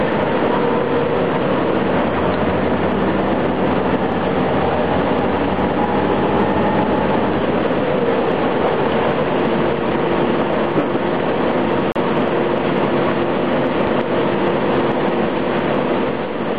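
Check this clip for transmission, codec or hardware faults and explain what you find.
One codec fault is present. From 11.92 to 11.96 s there is a gap at a join of encoded pieces: a silence of about 36 ms cuts into continuous sound with smeared edges, and the sound then resumes where it stopped. Two separately encoded segments were joined without trimming the encoder's start delay and end-frame padding.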